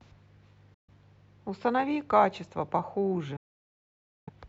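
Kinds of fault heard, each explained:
Bluetooth dropout: sound cuts to silence for 0.14 s, then 0.91 s, likely from lost wireless packets, and resumes further on rather than where it stopped.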